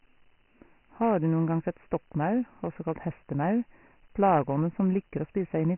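From start to end, the speech carries Dialogic VOX ADPCM damage, and it is heavy. Nothing sounds above about 3.1 kHz, which fits a 6,000-samples-a-second rate. Coarse 4-bit adaptive steps leave a gritty hiss riding on the speech. The dull, narrow band points to roughly 24 kbps.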